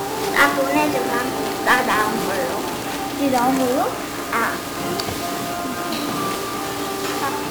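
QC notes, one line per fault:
Throughout: 1-bit DFPWM compression. Heavy broadband fuzz and crackle coat the sound and bury the treble in hiss. This fits a coarse one-bit stream around 48 kbps.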